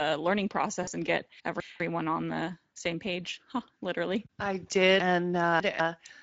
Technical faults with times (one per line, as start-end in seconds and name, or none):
0.00-6.22 Speex codec
0.83-0.89 VoIP packet loss concealed by the speech codec
1.40-1.80 chunks out of order
5.00-5.80 chunks out of order